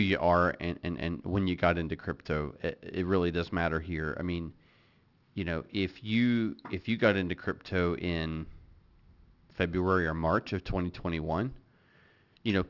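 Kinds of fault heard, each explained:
Aliasing: sibilants sound gritty and metallic, with false tones folding back below 6 kHz, the result of resampling to 12 kHz without an anti-aliasing filter.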